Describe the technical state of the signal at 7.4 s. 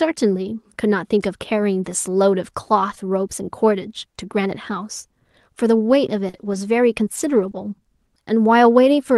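At 7.4 s the signal sits inside a stretch of scattered short gaps, 6.29 to 7.57 s: about three lost or late packets, the longest near 40 ms, were patched by extending the preceding sound, leaving brief ticks and smeared hiccups.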